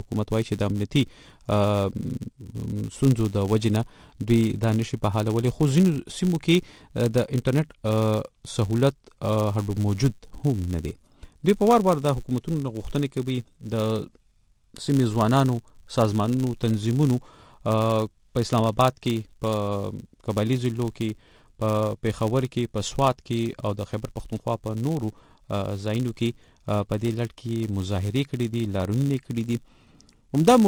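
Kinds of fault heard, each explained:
Filter restarted on every block: the filter loses its stored state at each block boundary and starts again from silence. A small transient at the start of every block produces a buzz at about 100 Hz, tracking the signal's level through the clip.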